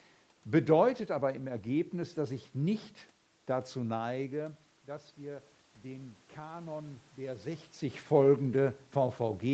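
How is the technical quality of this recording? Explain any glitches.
One glitch stands out, an automatic gain rising episode from 4.16 to 7.58 s. When the talker moves away around 4 s, the input drops by about 14 dB, and the gain control slowly raises its gain by about 4 dB. Voice and room noise swell upward together over those three seconds rather than holding steady.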